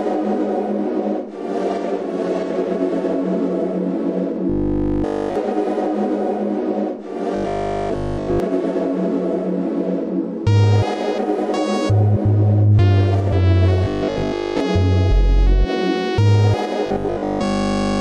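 Robotic sound from repeated short buffers appears at 4.50–5.36 s, 7.36–8.40 s, 13.84–14.60 s and 16.86–18.00 s, the last running to the end. In each stretch the audio becomes a rigid, metallic 50 Hz buzz, which fits a 20 ms block being replayed, likely because fresh audio arrived too late and the last block was looped. The first, second and fourth are almost entirely repeats; the third is about 70% repeats and keeps roughly 30% real audio.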